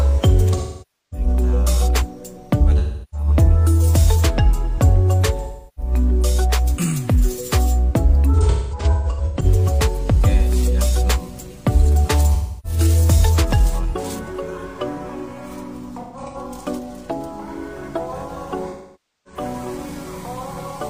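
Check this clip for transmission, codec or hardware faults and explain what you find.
Seven smeared, hollow patches break up the sound, where it turns noisy and phasey and partly sags toward silence before recovering: 0.56–1.27 s, 2.78–3.27 s, 5.39–5.92 s, 8.33–9.45 s, 12.34–12.79 s, 16.01–16.37 s and 18.70–19.40 s. This is AAC frame loss with concealment. Runs of compressed frames went missing, and the decoder filled each gap by reusing the last good spectrum with jumbled phase, letting it fade as the loss went on. The gaps work out to about 43 ms per lost frame. Around 8.3 s and 16.0 s the dropouts are scattered rather than continuous, with the longest unbroken runs near 200 ms and 150 ms.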